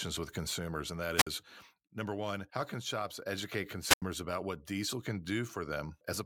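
A speech clip with two brief bursts of hiss collapsing into near silence: after "with consumers and that" (1.16–1.27 s, about 51 ms muted) and between "how can shops educate" and "about what diesel can" (3.81–4.03 s, about 85 ms). This is wireless microphone squelch dropout, where the FM signal fades and the receiver mutes.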